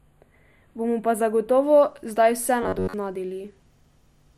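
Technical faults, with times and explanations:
0.00–1.64 s, channel delay (comb filtering): One channel trails the other by only a few samples, roughly a tenth of a millisecond. When the two are summed to mono, the shared content cancels where the offset equals half a cycle, so the first notch falls somewhere around 5 kHz, with further notches evenly spaced above it. The speech sounds thin and phasey, with the upper presence region hollowed out, until the offset clears after 1.64 s.
2.63–2.94 s, robotic sound from repeated short buffers: For about 0.3 s the speech turns into a rigid, metallic buzz pitched at 93.8 Hz. It still follows the rough shape of the syllables. The likely cause is buffer starvation: a fragment of about 10.7 ms, the period of that buzz, is looped to fill gaps. Roughly two-thirds or more of the audio in this stretch is repeated material rather than new signal.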